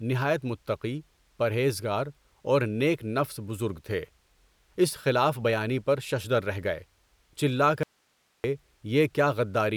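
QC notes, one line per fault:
7.83–8.44 s, audio dropout to a faint residue: speech cuts abruptly for about 0.61 s, leaving only hiss roughly 45 dB down, likely a brief signal loss with the path still live.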